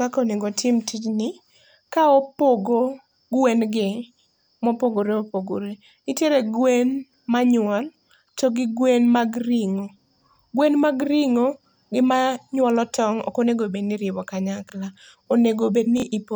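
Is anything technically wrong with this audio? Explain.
Yes. At 14.68 to 14.72 s and 15.98 to 16.02 s, chunks out of order: a 23.22 ms block plays one chunk late, leaving three hard joins and causing a brief jumbled stutter.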